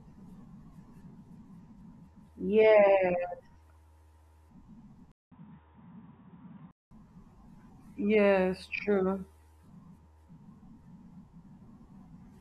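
Input switched to a poorer device, from 5.12 s to 6.91 s in this speech recording: a 200 ms silence marks the switch, and then the sound turns dull and boxy, with nothing above 3.8 kHz, a level change of about 5 dB and a faint new noise floor sitting far below the speech. At 6.91 s the full bandwidth returns. The cause is likely the system changing its input mid-recording to a narrower-band microphone or headset call profile.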